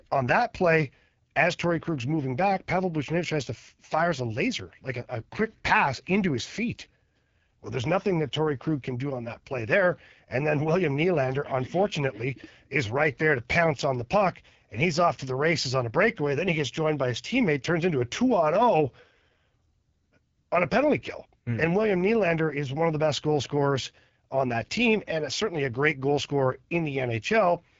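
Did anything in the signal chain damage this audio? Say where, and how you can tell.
Yes. The damage sits at the codec stage: this speech has been through the AMR wideband (HD Voice) codec, and it's audible from start to finish. The raspy, rough texture fits one of AMR-WB's two lowest modes, around 8.85 kbit/s, where the pulse model is too coarse to track the voice cleanly. There's also nothing above about 7.5 kHz, and the top band is filled with shaped noise rather than real detail.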